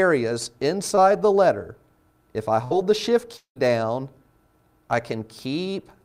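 At 0.95 to 0.99 s there is a brief smear, a slight wobble that blurs the sound for a few hundredths of a second before it snaps back into place. This is short concealed packet loss. A small piece of the stream, about 20 ms, never reached the decoder in time. The receiver covered the hole by extending the last sound it had, for roughly 14 ms, then cross-faded back into the real audio.

From 2.65 to 2.73 s the sound hangs on a held, fading tone and then jumps ahead, with a short stretch plainly gone. That is a burst of packet loss. Several packets in a row, about 60 ms of audio, were lost or arrived too late to play. Concealment repeated the last sound for about 58 ms while lowering its level, and playback then resumed at a later point.

Between 3.37 and 3.58 s the sound turns into a decaying buzz or hiss, falls to near silence for roughly a tenth of a second, and then returns further along. 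This points to a long network dropout as the likely cause. Around 200 ms of audio never arrived. The receiver stretched the last sound for a short while as it died away, left a silent gap of about 110 ms, and then continued without the missing part.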